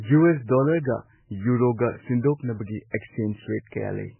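From the start the speech sounds heavily squeezed, with nothing above 3 kHz and a watery swirl; that's likely MP3 compression, consistent with a very low bitrate around 8 kbps. At 2.90 to 2.93 s there's pre-echo: about 30 ms of hiss leaks ahead of an attack because the block's noise spreads backward, softening the onset.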